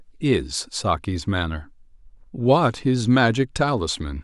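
Nothing stood out as a technical problem when listening to this speech recording.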